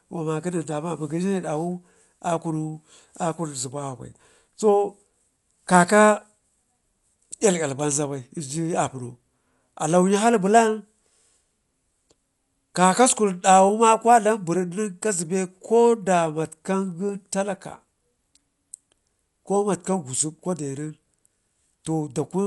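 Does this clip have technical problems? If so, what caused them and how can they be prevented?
Yes. Throughout, the speech sounds dull, with nothing above 11.5 kHz and a rough, fluttering noise around voiced tones. That's likely Dolby Digital compression at a low bitrate, around 64 kbps: the encoder narrowed the band and left many frequency lines as filler noise. Encode at a higher bitrate to prevent it.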